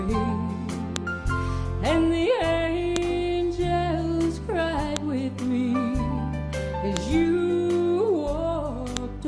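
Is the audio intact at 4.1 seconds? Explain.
Yes, the audio is intact at 4.1 seconds, with no dropout, click, distortion or other fault at that moment.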